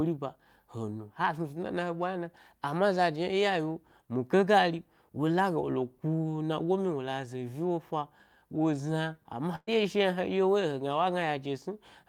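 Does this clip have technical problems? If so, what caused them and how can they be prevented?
Yes. There is a burst of packet loss from 9.55 to 9.69 s. Several packets in a row never arrived in time. The receiver filled about 117 ms by repeating the last bit of speech and fading it down. A short silence of about 30 ms follows. Then the speech resumes, with about 120 ms skipped. A larger jitter buffer, forward error correction, or a more stable network connection would prevent this.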